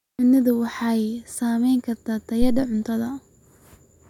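A phantom power thump lands at 2.42 s in this speech recording and dies away by about 2.67 s. A supply voltage was switched on or off on a live input, and that sudden DC step passed through the coupling capacitors as a low, heavy thud. It peaks at about −11 dBFS and decays quickly, with a time constant of about 56 ms. The thump sits on top of the speech for roughly a quarter of a second.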